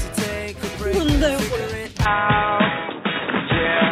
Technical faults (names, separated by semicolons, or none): input switched to a poorer device